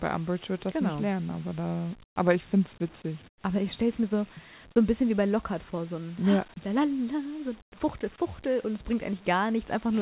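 At 2.04–2.16 s (between "nicht lernen aber da" and "aber ich finde es"), 3.28–3.44 s (after "ich finde es witzig") and 7.62–7.72 s, the background drops out for smoother comfort noise, about 23, 16 and 18 dB quieter, likely from discontinuous transmission on a band-limited, 4 kHz-topped call path.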